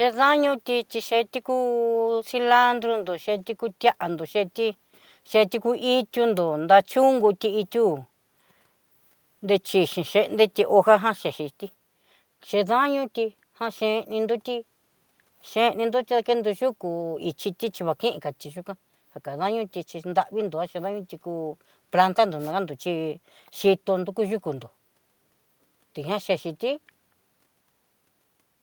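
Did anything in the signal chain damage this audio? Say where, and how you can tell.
No, nothing in the signal chain damaged this audio, and there is no point along it where any harm can be heard.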